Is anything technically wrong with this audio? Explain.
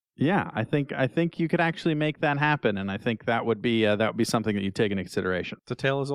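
No, nothing technically wrong can be heard in this speech recording. A careful listener would find nothing in it to flag.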